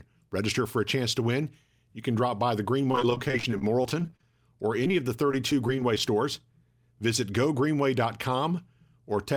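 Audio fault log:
2.91–4.33 s, repeated packet loss (robotic sound): The speech breaks up into a rapid series of very short holes, each about 25 ms at most. The last sound is stretched over each hole, so roughly a fifth of this stretch is patched. That gives a choppy, robotic texture.
4.84–6.00 s, repeated packet loss (robotic sound): The same breakup is milder here. The holes are fewer and shorter, about 15 ms at most, and about a tenth of the span is concealed.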